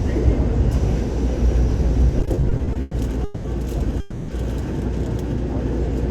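From 2.19 s to 3.46 s the sound falls into repeated stalls, a stutter. Packets kept reaching the receiver late, so its jitter buffer ran dry eleven times in that span. At each gap the receiver stretched the last sound to cover the wait. Together these fills add 470 ms, about 37 percent of the span. The longest single gap is 200 ms. Nothing is lost. The sound simply drags and catches, over and over.

At 4.00 s the sound freezes for 280 ms, until 4.30 s. This is a call audio freeze. The last sound is held on as a fading buzz or hiss rather than dropping to silence. Then the audio resumes exactly where it stopped, with nothing skipped. The likely cause is packets held up in transit, which emptied the jitter buffer. Everything after it now plays 280 ms later.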